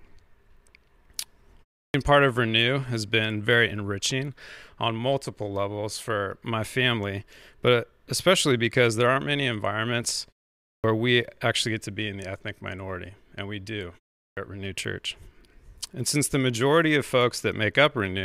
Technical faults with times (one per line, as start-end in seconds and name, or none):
1.86-1.94 clipped start after a pause
10.74-10.84 clipped start after a pause
14.27-14.37 clipped start after a pause